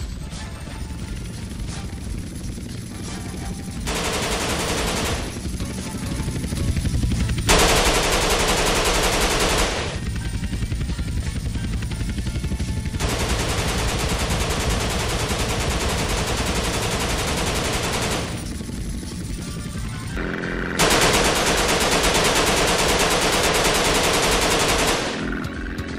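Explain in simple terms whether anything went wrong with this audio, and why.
Nothing went wrong here that you'd notice; it all comes across as it should, with no glitches or hiccups anywhere along the way.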